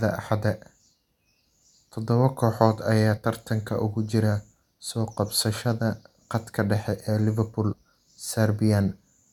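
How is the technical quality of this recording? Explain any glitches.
The recording has three brief glitches in the speech, all from damaged data in a compressed stream. They occur at 0.93 s, from 3.16 to 3.18 s (between "kooxood ayaa" and "tartanka ugu jira soo"), and from 7.71 to 7.73 s. At each point, corrupted bytes make the decoder misread a frame and lose sync until it finds the next header. The result is a short chirp or blip. On a spectrogram each appears as a thin vertical smear of broadband energy, and on the waveform as an abrupt discontinuity.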